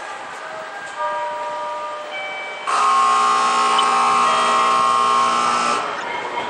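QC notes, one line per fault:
Throughout: MP3 compression, likely at a low bitrate around 64 kbps. The damage is plainly audible: weak frequency detail flickers in and out between frames, giving a watery, swirling texture with smeared attacks and metallic edges on bright sounds.
5.98 to 6.03 s: corrupt frame decoded. The decoder played damaged data across roughly two frames, so energy landed at wrong frequencies for about 50 ms, heard as a short chirp or burst of noise peaking at about -15 dBFS.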